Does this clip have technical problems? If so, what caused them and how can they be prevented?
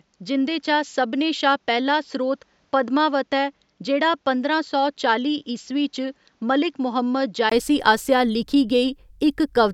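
Yes. From the start to 7.52 s the speech is dull and boxy, with nothing above 7.6 kHz. It is also quieter, by about 5 dB, and carries its own faint background noise, well below the speech. A 20 ms silence at 7.52 s precedes "आसेआ लिखी", after which the full, brighter sound returns. This fits an input switched to a poorer device for that opening stretch, likely another microphone or a headset's call profile taking over. To prevent it, lock the recording input to one chosen microphone and disable automatic device switching.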